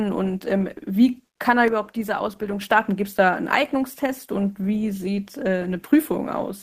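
A sudden gain jump comes at 1.68 s, just after "kann er": the speech and the background noise drop together by about 6 dB in a single step and stay at that lower level until 2.61 s, where they jump back up. Because the change lands between one sample and the next with no ramp, each edge is abrupt. The likely cause is a digital gain setting or bit shift applied instantly rather than faded in.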